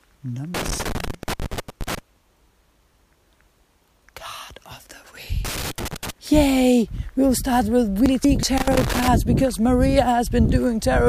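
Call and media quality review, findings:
Loose connector crackle: irregular scratchy bursts at 0.54–1.99 s, 5.45–6.10 s and 8.58–9.08 s. Probable component is a worn or dirty cable contact, making and breaking under movement. The signal is chopped, and any DC on the line adds pops.

Frames out of order at 8.06–8.43 s: garbled flutter. Two adjacent runs of about 186 ms each were swapped, which fits two-frame runs decoded in the wrong order. Probable component is the packet or frame reordering stage. No time is lost.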